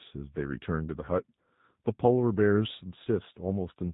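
From start to finish the speech carries the sound of the G.729 codec, and the damage is plainly audible. Nothing reaches above 4 kHz, so it's dull and telephone-narrow, and there's that slightly rough, synthetic edge you get when speech is rebuilt from a vocal tract filter, a pitch predictor and a handful of pulses per frame. It all points to something like G.729A at around 8 kbit/s.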